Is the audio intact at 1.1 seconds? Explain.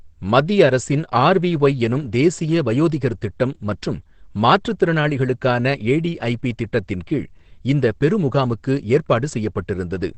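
No. At 1.1 seconds, as across the whole clip, the speech has most likely been squeezed through Opus compression at a very low rate, around 12 kbps, where the encoder switches to its SILK speech mode and codes only a wideband signal. Nothing survives above about 8.5 kHz, so the speech sounds muffled and dull, and the heavy coding damage gives it a hoarse, rough texture in place of clean detail.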